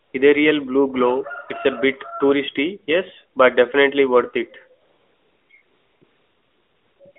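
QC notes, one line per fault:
0.02–0.14 s, 4.82–5.50 s, 5.62–6.02 s, 6.04–7.00 s and 7.12–7.16 s: AMR comfort noise. The sender judged these gaps silent and stopped sending speech frames, for 120 ms, 680 ms, 400 ms, 960 ms and 40 ms. The receiver filled each gap with smooth synthetic hiss built from a coarse level and spectrum. The real background drops out and this steady noise switches in and out. The narrowband line stays within about 250 Hz to 3.6 kHz, which fits a higher AMR mode.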